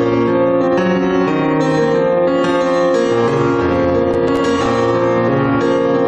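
From 4.11 to 4.66 s, processor overload crackle: roughly seven tiny buffers, each about 1.5 ms, miss their deadline and drop to silence, producing clustered crackle rather than one isolated click.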